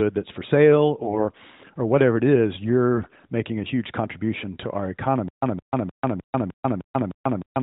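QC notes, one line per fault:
1.02–1.27 s and 2.94–3.26 s: AMR bit errors. The first run falls between "that's for sale" and "or whatever it is". The second follows "or whatever it is" and ends at "making a huge contribution". Pitch and level hold, but the sound turns hoarse, scratchy and gargly. Flipped bits in the weakly protected parts of each frame misplace the excitation pulses and skew the fine gain and spectral values. The lengths fit about a dozen and seventeen 20 ms frames hit, at a few percent bit error rate.
5.28 s to end: stutter with silent gaps. After "huge contribution to our", a 164 ms fragment repeats every 305 ms, with 141 ms of digital silence between repeats. This runs to the end of the clip. The cause is likely a stalled player or stream replaying its last buffered fragment at each retry, then running empty. The audio that should have played here is lost. The light narrowband AMR coloration at 12.2 kbps can still be heard in the repeated fragment.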